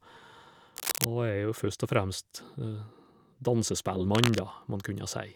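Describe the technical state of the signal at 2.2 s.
At 2.2 s the speech signal is intact, with no dropout, distortion or other technical fault at that point.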